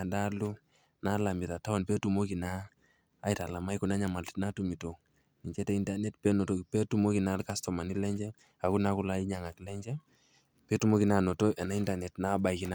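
No technical faults are audible.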